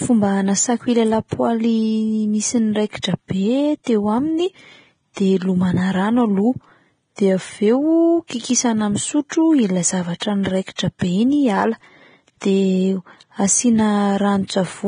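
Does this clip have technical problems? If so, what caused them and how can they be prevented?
Yes. Heavy coding damage runs through the whole speech clip: hissy, grainy treble and nothing above 9.7 kHz. That's likely Vorbis compression at a low bitrate, somewhere around 23 kbps. Encoding at a higher Vorbis quality setting would keep the top end clean.

There's pre-echo at 3.02 s, 10.2 s and 10.76 to 10.79 s. The codec's block noise leaks ahead of sharp onsets as a brief smeared hiss. A higher bitrate or better transient handling in the encoder would keep those attacks crisp.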